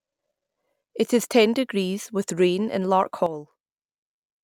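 A sudden gain jump at 3.26 s, right after "degrees with rain in", drops the speech by about 10 dB and holds it there to the end of the clip. The speech and the background noise fall together, in a single step with no fade, so the last part sounds abruptly quieter. The likely cause is a digital gain setting or bit shift applied at one sample instead of being ramped in.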